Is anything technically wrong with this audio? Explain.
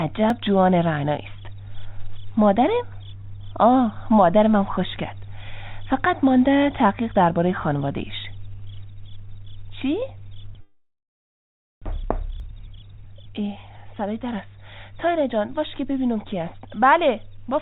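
Yes, there are three kinds of fault.

Dropped buffer (overrun), at 0.30 s and again at 12.40 s: each time the sound jumps ahead by roughly 10 ms. The likely cause is samples not being collected before the hardware overwrote them, so the audio on either side is joined directly.

Long network dropout, from 10.61 to 11.88 s: about a second of audio never arrived. The gap was filled by extending the last sound into a fading buzz, then about 950 ms of near-silence follows. The sound returns further on without the lost section, and the delay likely grew by around 200 ms.

Jitter buffer speed-up, from 11.96 to 14.42 s: with that extra delay built up, the receiver cut many tiny pitch-period-sized pieces, about 200 ms in total, to catch up. The sound runs about 8% fast and feels hurried, though the pitch stays the same.

All of this comes through a G.711 mu-law call path at 64 kbps, which is why nothing is heard above 4 kHz.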